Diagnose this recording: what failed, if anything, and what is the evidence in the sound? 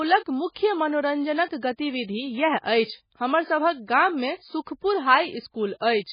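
Heavy MP3 compression at the codec stage is the likely cause. Throughout the speech nothing survives above 5 kHz, and the sound is watery and swirly, which fits a starved bitrate near 16 kbps. A spectrogram shows a hard ceiling at 5 kHz, with weak detail blinking between frames.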